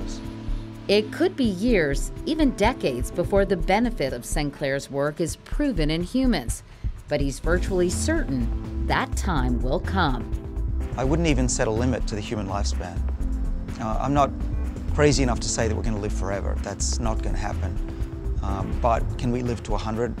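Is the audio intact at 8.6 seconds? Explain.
Yes, the audio at 8.6 seconds is intact, with no dropout, glitch or other fault audible at that moment.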